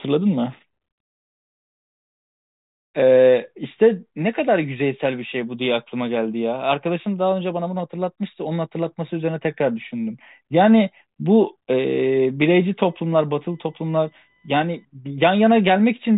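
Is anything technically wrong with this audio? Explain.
Yes. From 12.80 to 14.85 s there is computer activity noise: a faint buzzing chirp pulsing at around 1 kHz, roughly 45 dB below the speech. It comes from processor or peripheral load shifting the shared ground of the audio circuit, so it follows the machine's activity rather than the speech.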